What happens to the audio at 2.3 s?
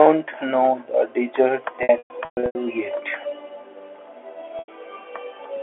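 At 2.3 s you're right in the middle of a stretch of packet loss with pitch repetition, running from about 1.83 to 2.55 s. Around 420 ms of audio goes missing in bursts scattered across that 720 ms window, which fits roughly 30 ms packets. For each gap, the receiver keeps looping the last pitch period to cover the hole, so the short dropouts come across as a brief, slightly buzzy held tone. The longest burst lasts about 120 ms, long enough for that repeated tone to fade away into silence before the sound cross-fades back in. All of it sits on an otherwise narrow telephone-band G.711 line.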